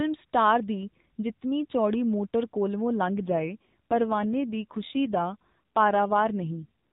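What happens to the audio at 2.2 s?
Nothing goes wrong at 2.2 s: the speech there is intact, carrying only the narrow, band-limited character of the AMR narrowband mobile codec it passes through.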